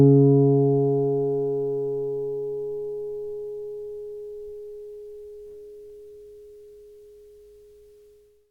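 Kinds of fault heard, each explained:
No technical faults detected anywhere in the audio.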